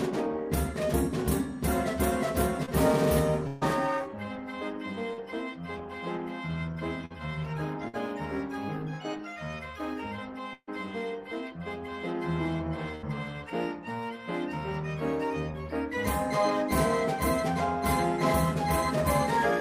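At 2.65 s a brief smear of about 20 ms is heard. This is short concealed packet loss: the receiver stretched the preceding sound over the missing audio. At 3.47 s the sound holds as a buzz or fading hiss for about 140 ms, then resumes further on. This is a burst of packet loss: consecutive packets were lost or arrived too late and the concealment faded out. A second short concealed loss of about 40 ms smears the sound at 5.13 s. Further bursts follow at 7.05 s and 7.88 s, each losing about 40 to 60 ms. The burst at 10.53 s loses about 140 ms, and the concealment decays into 60 ms of silence before the audio returns. The last burst, at 12.95 s, drops about 60 ms.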